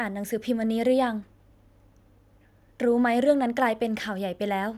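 No technical faults can be heard anywhere in the speech recording, which holds steady and continuous throughout.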